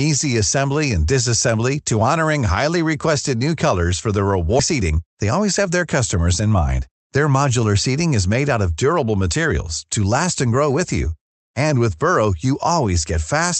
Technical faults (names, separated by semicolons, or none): skip ahead; jitter buffer speed-up